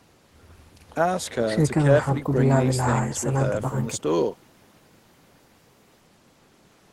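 No technical faults can be heard in this speech recording. It has passed through a working call path, and the high frequencies stop at about 12 kHz, which fits a call codec running at a modest bitrate.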